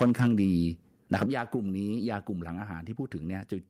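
The microphone's input level was likely set too high at the start: from 0.00 to 0.27 s the speech drives the converter about 8 dB past its ceiling, and roughly a tenth of the samples are flattened at the converter's limit. That microphone overload gives the opening syllables a harsh, crackly edge. At 0.27 s the call software, likely reacting to that clipping, performs a microphone volume step down of about 2 dB, a small but sudden drop in both speech and background. Between 1.13 and 1.23 s the speech again likely pushes the converter into overload, this time about 6 dB over, with a few percent of samples squared off, so a short burst of the same gritty distortion lands on the loudest part. At 1.26 s the software likely steps the input volume down again, by about 7 dB. The whole sound, room tone included, abruptly drops to a noticeably quieter level.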